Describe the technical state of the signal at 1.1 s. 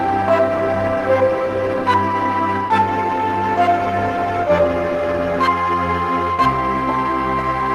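At 1.1 s the signal is intact, with no audible fault at that point.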